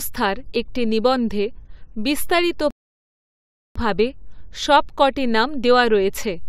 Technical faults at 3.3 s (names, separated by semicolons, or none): rebuffering stall